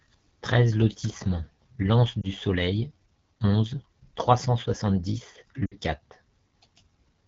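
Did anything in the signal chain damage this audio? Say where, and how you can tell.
Yes. The AMR wideband (HD Voice) codec damages the speech throughout. It is plainly rough and raspy, which fits AMR-WB at one of its lowest rates, around 8.85 kbit/s. At that rate the pulse-driven vocal tract model runs short of bits, and the band above 6.4 kHz is only shaped noise.

Lost AMR speech frames, a network fault, occur at 2.22 s for about 20 ms and from 5.65 to 5.74 s for 60 ms, consistent with one frame and then three. The decoder held the last pitch and vocal tract settings with falling gain, so the first is a brief dip or warble and the second drops to near silence before the speech returns weak or rough.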